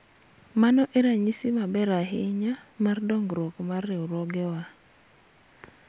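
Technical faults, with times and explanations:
No technical fault can be heard in this speech recording. There is nothing to list with a time or an explanation.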